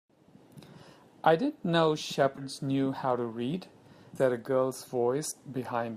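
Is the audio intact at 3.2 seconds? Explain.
Yes, the speech at 3.2 s plays through without any audible dropout, distortion or other technical fault.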